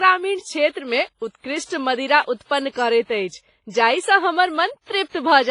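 WMA compression runs throughout the speech and is likely the cause of its heavy damage. Nothing survives above 10.3 kHz, which suggests a low bitrate near 24 kbps. Long transform blocks smear quantisation noise into a ringing, washy hiss that breathes with the signal.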